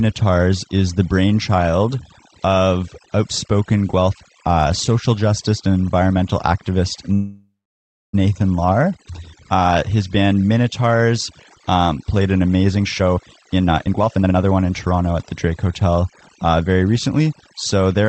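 Speech clip carried over a call path whose Opus coding leaves content up to about 8 kHz, with overdone noise removal throughout: the background drops and breaks up into twinkling specks. This differs from plain codec band-limiting because individual bands are switched off in flickers rather than the top end being cut evenly. After "justice and environmental activist", from 7.13 to 8.15 s, a call audio freeze stretches the last sound into a fading buzz or hiss, then about 0.6 s of silence. The speech then resumes exactly where it stopped. Because nothing is skipped, this is an inserted gap rather than a dropout, likely caused by delayed packets draining the jitter buffer. After "um played an amazing", from 12.84 to 15.35 s, a jitter buffer speed-up makes the speech run at about 140% speed, roughly a second shorter overall, as many short pitch-period slices are cut out. The pitch stays put, which separates it from a resampling speed change.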